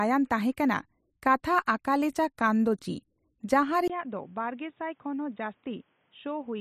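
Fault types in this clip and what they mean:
Input switched to a poorer device: At 3.88 s the speech stops for about 20 ms, then returns duller and boxier, with nothing above 3.8 kHz, a level around 10 dB lower, and a new background noise roughly 40 dB under the speech, lasting to the end. The likely cause is a change to another microphone or headset profile. A filter or codec bandwidth drop would change only the tone, not the level or the noise floor.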